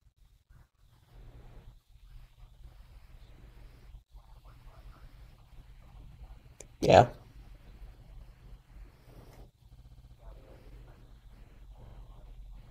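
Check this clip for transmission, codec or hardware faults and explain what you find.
The speech contains two stutters from repeated frames. From 9.75 to 10.13 s, a 64 ms block replays six extra times. From 11.86 to 11.95 s, a 43 ms block replays twice. The same compressed frames were written or sent again, so the decoder plays that sound again. This adds about 0.47 s in total.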